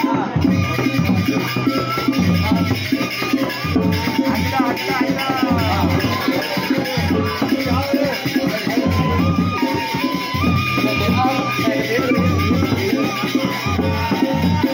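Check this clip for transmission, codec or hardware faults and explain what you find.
Nothing in the audio points to a transmission, codec or hardware problem.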